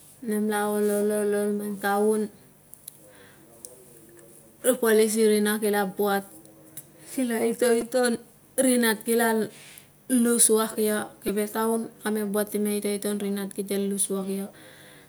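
At 7.81 s and again at 11.28 s the speech gives a brief buzzy click, a repeated buffer: audio arrived late, so one tiny chunk of about 2.9 ms, which fits a 128-sample buffer, played five times over. A waveform shows identical short cycles with hard joins. A spectrogram shows a thin vertical stripe with harmonics near 345 Hz. Virtually nothing seems lost.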